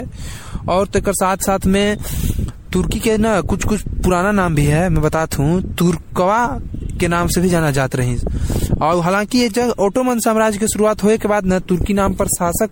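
From start to finish the speech carries generation loss, likely from being decoded and re-encoded as MP3 around seven times, each pass quantising again on a shifted frame grid. The result sounds swirly, hollow and smeared, with consonant attacks blurred, rougher than a single 64 kbit/s encode would leave it. On a spectrogram, nothing appears above 16.6 kHz, and the upper bands show scattered holes and flickering blocks, while onsets in the waveform look softened.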